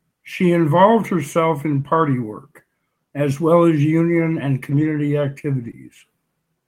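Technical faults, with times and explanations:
1.81–1.85 s, short concealed packet loss: About 20 ms of the call arrived too late for the decoder, so the receiver covered the gap by extending the preceding speech, following its pitch if voiced or as shaped noise if not, then crossfading back into real audio. This is heard as a brief smear or wobble, and a quick consonant here may drop out.
1.85–1.87 s, lost packet rebuilt from error correction: Straight after the concealed gap, another 20 ms was lost but recovered from a low-bitrate copy carried in the following packet (Opus in-band forward error correction). There is no hole, just a moment of coarser, noisier speech.
4.71–4.85 s, lost packet rebuilt from error correction: The longest repair, about 80 ms, which fits four separate 20 ms frames restored from their in-band copies. The speech carries on unbroken but sounds rougher and grainier than the surrounding audio.
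5.63–5.69 s, lost packet rebuilt from error correction: Roughly 40 ms rebuilt from the redundant copies in the following packets, heard as a short patch of rougher, noisier texture with no break.
5.71–5.75 s, short concealed packet loss: Another 20 ms never arrived in time and had no recovery copy, so the decoder extended the preceding speech and blended back in. This gives a second brief wobble or smear, close after the previous repair.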